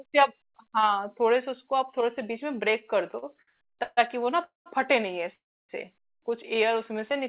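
From 3.11 to 3.99 s you get repeated stalls, a proper stutter. Packets kept turning up late, so the jitter buffer ran dry nine times and the receiver stretched the last sound to cover. About a third of that stretch is filler, the longest hold 141 ms, and the speech drags and hiccups.

Then come two call audio freezes, at 4.44–4.68 s and 5.34–5.71 s. The sound holds as a fading buzz for about 0.22 s and 0.35 s, most of it near-silence (150 ms, then 310 ms), and picks up where it stopped. That's likely packets held up in transit emptying the buffer.

From 6.57 s to 7.24 s there's a jitter buffer slow-down. The buffer was topping itself up by repeating single pitch periods, adding about 50 ms, so the speech plays at 93% speed with the pitch unchanged, sounding slightly drawn out, all over a band that stops at 4 kHz, which fits a narrowband G.711-type call codec.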